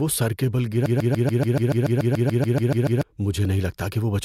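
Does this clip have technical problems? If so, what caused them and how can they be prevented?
Yes. Right after "سر کے بل", at 0.86 s, a broken-record loop begins. A 144 ms fragment repeats exactly, back to back, 15 times, until 3.03 s. It sounds like a rapid mechanical stutter. The likely cause is a stall in the player, encoder or stream, which kept resending the last piece it held. The audio that belonged in those two seconds is lost. To prevent it, detect stalled buffers and resync or mute rather than replay stale data.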